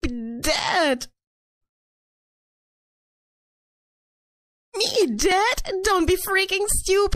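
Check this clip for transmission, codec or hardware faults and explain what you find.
There's one problem, and it runs through the whole clip: MP3 compression damage that's plainly audible. The weaker detail flickers in and out, giving a watery, swirly texture with metallic chirps on bright, hissy sounds and softened attacks. That's what an encoder does when it runs short of bits and drops whatever its hearing model ranks lowest. A low bitrate is the likely cause, and the damage fits something around 64 kbps.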